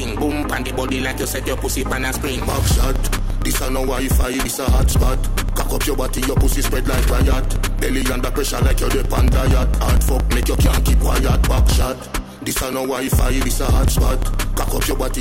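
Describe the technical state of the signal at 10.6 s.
Regular ticks recur every 0.115 s from 0.08 to 15.14 s: periodic USB or driver dropouts, where a blocked bus or driver skips about 10 ms of audio each time.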